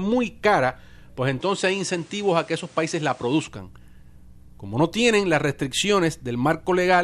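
From 1.41 to 3.48 s the speech dulls, losing everything above 10.5 kHz, with faint new noise. Likely an input switched to a poorer device.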